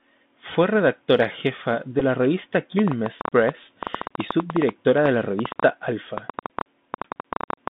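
The whole clip passes through the Bluetooth CVSD headset codec. The band runs only from about 150 Hz to 3.6 kHz. Each sample is a single up-or-down bit, and the step size lags behind fast changes. Sibilants sound scratchy, and a grainy hiss sits under the speech.

From 2.00 to 2.03 s, between "redactora jefa" and "la revista", a Bluetooth headset packet is repeated. The stretch lasts about 11 ms, which points to three lost packets. The decoder replays old bits, so a brief buzz cuts in.

From 2.79 s, right after "la revista", a train of clicks runs to the end at 7.69 s. There are roughly 40 clicks at about 9 per second, unevenly spaced, peaking around 15 dB above the speech. Interference from nearby equipment or a faulty connection or power supply is the likely cause. They sound like ticking and popping, pauses included.

At 5.50 s a second Bluetooth headset packet repeat occurs. It covers about 7.5 ms, which fits two lost packets. 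The replayed audio gives a very brief buzz.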